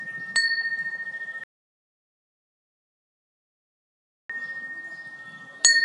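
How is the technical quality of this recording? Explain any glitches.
The recording has one serious glitch: an audio dropout to silence. From 1.44 s to 4.30 s the sound cuts out to silence, with no room tone, for about 2.86 s. The likely cause is a lost input, with the recorder writing silence, so whatever happened during that stretch is gone.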